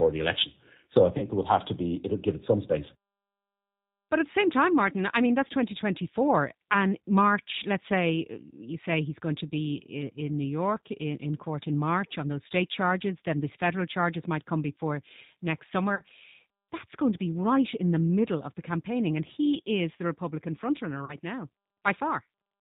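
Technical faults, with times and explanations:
Throughout, G.729 codec: the speech is band-limited with nothing above 4 kHz, and it sounds plainly rough and synthetic, as if rebuilt from a vocal tract filter, pitch predictor and sparse pulses. That fits the 8 kbit/s G.729A model, which resynthesises speech rather than just filtering it, so the damage is steady and never comes as isolated dropouts.
1.18 to 1.28 s, 15.95 to 16.02 s and 21.05 to 21.16 s, VoIP packet loss concealed by the speech codec: about 40 ms of audio is missing each time, which fits two lost packets. The decoder stretches its last pitch and filter into a buzzy tone or coloured noise that fades instead of leaving silence. Because each frame builds on the one before, the sound stays weak or smeared for a moment afterward, as heard leading into "there would have to" and just after "might come before next".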